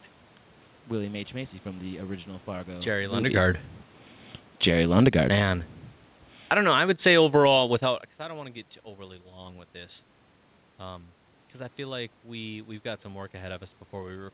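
Automatic gain falling runs from 4.64 to 7.62 s, ending just before "without because I don't". The gain control judged the speech input too loud or its background noise too strong and eased its gain down by about 14 dB over those three seconds, so the voice and the room noise beneath it sink together.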